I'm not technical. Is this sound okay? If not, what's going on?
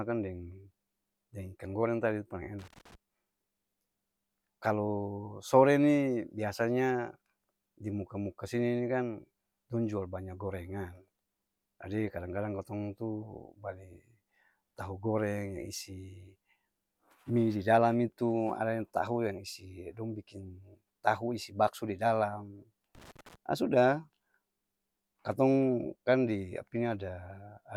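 No. Twice the speech is interrupted by a brief, uneven burst of crackling and scratching. The first runs from 2.59 to 2.95 s, right after "goreng tadi paleng", and the second from 22.95 to 23.36 s, between "isi bakso di dalam" and "aa sudah". This is loose connector crackle. A worn or dirty plug or socket keeps losing and regaining contact as it shifts, so the sound is chopped up.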